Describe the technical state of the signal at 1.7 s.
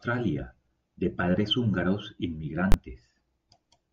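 The signal at 1.7 s is intact, with no audible fault at that point in the speech.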